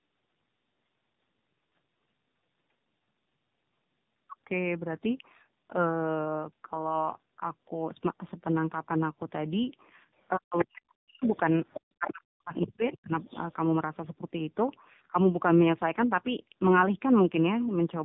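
The whole clip carries tandem speech coding. It sounds like two narrowband coding passes in a row, cut off above 3.8 kHz, so it comes out rough, muffled and a bit warbly.

From 10.16 to 10.28 s there's very faint other side's voice leaking through, about 40 dB down, likely echo the canceller missed. Then from 10.37 to 11.22 s the speech is suppressed in double talk, with dips of up to about 40 dB adding up to roughly 0.7 s. Inside that stretch, from 10.59 to 10.82 s, the leak gets strong, only about 5 dB under the talker. It comes back from 11.22 to 11.8 s at about 15 dB down, and again from 12.61 to 13.53 s at about 20 dB down.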